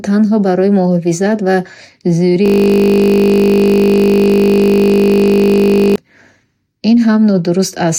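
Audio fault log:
2.46–5.96 s, system hang loop: the machine or its audio driver froze while the sound hardware kept replaying the same 20 ms ring buffer, about 175 times in a row, so the speech gives way to a steady, even buzz at 50 Hz.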